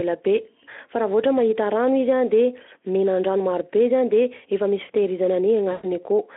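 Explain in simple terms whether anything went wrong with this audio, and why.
VoIP packet loss concealed by the speech codec appears from 5.71 to 5.87 s. About 120 ms of the call's data never arrived, so the Speex decoder, which only lightly colours the phone-band speech elsewhere, guessed at the missing sound by repeating the last pitch and tone and letting it fade. That guess comes out as a short buzzy or smeared stretch, and because each guess builds on the one before, the voice sounds weak for a moment after the data returns.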